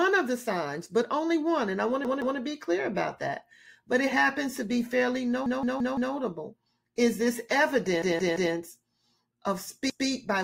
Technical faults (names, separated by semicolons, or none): repeated buffer